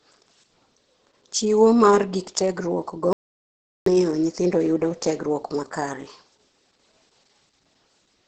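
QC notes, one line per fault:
Throughout, Opus voice compression: the speech is heavily damaged and sounds muffled, hoarse and faintly robotic, with nothing above about 9.1 kHz, which fits a low bitrate near 10 kbps in SILK mode. The excitation is coded coarsely, so the dulling has a hoarse, robotic edge rather than plain low-pass filtering.
3.13 to 3.86 s, audio dropout to silence: the speech cuts off mid-flow and returns after about 0.73 s of silence with no room tone at all, unlike a codec gap or packet loss concealment. This most likely comes from a momentary loss of input while the recorder kept writing silence, so whatever was said in between is gone.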